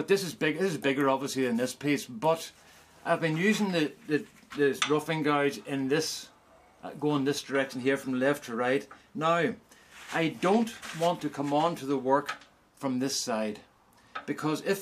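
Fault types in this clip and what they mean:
No faults can be heard anywhere in this clip. Nothing in the audio breaks, drops or distorts at any point.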